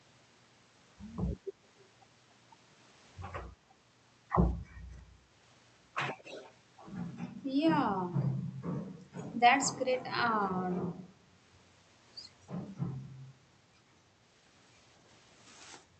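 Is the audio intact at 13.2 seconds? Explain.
Yes, the speech at 13.2 seconds is intact, with no dropout, click or distortion, only the ordinary band-limited sound of the Opus call path, which tops out around 8 kHz.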